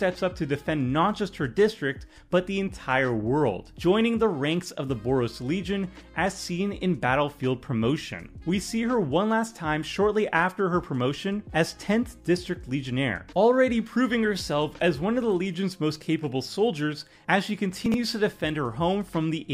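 Near 17.86 s there's a brief chunks-out-of-order glitch: a 20 ms chunk lands three chunks late, so the sound jumbles until 17.94 s.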